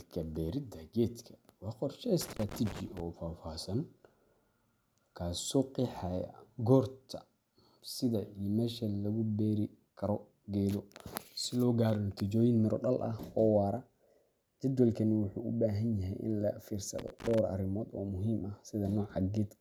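At 2.21 to 3.00 s, then again from 16.99 to 17.39 s between "baahan yahay in laga" and "arrimood oo muhiim ah", there's loose connector crackle: a worn contact cutting in and out, chopping the speech into irregular scratchy bursts.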